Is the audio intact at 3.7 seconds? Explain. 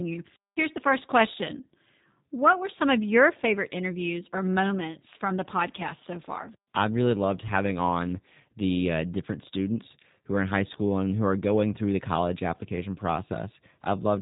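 No, the G.729 codec damage runs through the whole clip, including 3.7 s. Speech is rebuilt from a vocal tract filter and a few excitation pulses per frame, which fits an 8 kbit/s codec, and nothing above 3.8 kHz survives. Unlike a simple low-pass filter, this adds a rough, synthetic buzz on top of the muffling.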